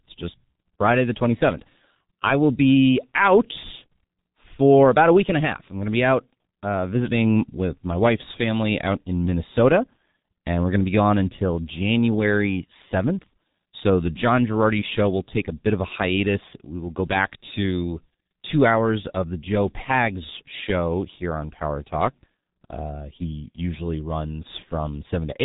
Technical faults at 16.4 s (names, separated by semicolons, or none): G.723.1 codec